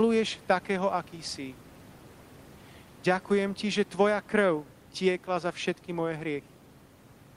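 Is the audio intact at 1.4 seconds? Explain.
Yes, the audio is intact at 1.4 s, with only the room's own background noise, about 27 dB below the speech, sitting underneath it.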